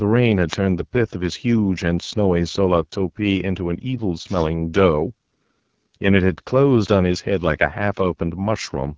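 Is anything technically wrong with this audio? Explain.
Yes, two faults can be heard in this speech.

The AMR wideband (HD Voice) codec runs through the whole clip, and its damage is plainly audible. The coder models speech below 6.4 kHz as pulses driving a vocal tract filter and fills 6.4 to 7 kHz with shaped noise. The rough, raspy texture fits its 8.85 kbit/s mode, one of its two lowest rates. On a spectrogram, harmonics look smeared and grainy, and a band of shaped noise sits on top. Nothing shows above 8 kHz, as expected from the call's microphone processing.

A wireless microphone noise hit occurs from 0.48 to 0.57 s. As reflections of the FM radio signal briefly cancel, the receiver's noise rises over the sound and is heard as a short swish of static. A spectrogram shows a vertical band of broadband noise about 90 ms wide, and the waveform shows a small patch of ragged, hissy fill there.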